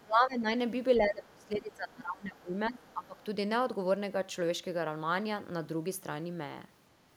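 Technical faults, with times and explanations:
0.03–0.47 s and 0.98–3.22 s, speech suppressed in double talk. The talker's speech dips by up to about 20 dB, for roughly 0.4 s and then about 2 s. This is likely an echo canceller confusing both talkers with echo and turning everything down.
2.84–2.93 s, other side's voice leaking through. A faint second voice appears for about 90 ms, roughly 30 dB below the talker. Residual loudspeaker sound was likely left in the microphone signal by incomplete echo cancellation during the overlap.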